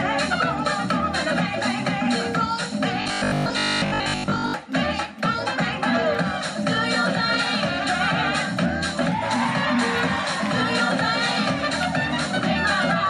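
From 3.02 to 4.54 s the sound turns robotic, taking on a rigid, metallic buzz at 50 Hz that still loosely follows the underlying material. This is robotic sound from repeated short buffers. The likely cause is audio arriving too seldom, so the playback side repeats the last fragment while the real audio in between is skipped. The 50 Hz buzz points to a repeated segment of about 20 ms, and most of that stretch appears to be filled with repeats rather than fresh audio.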